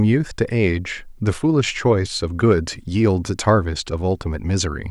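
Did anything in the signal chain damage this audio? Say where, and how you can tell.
No, nothing along the way seems to have hurt this speech recording; there's no sign of damage anywhere in the chain.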